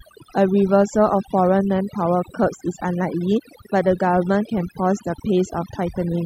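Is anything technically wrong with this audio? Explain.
Yes. Throughout the speech there is overdone noise removal: the reduction pulls individual frequency bands to near silence wherever they sit close to its noise estimate, so the background drops and twinkles. Unlike a gate, it doesn't cut the whole signal at once.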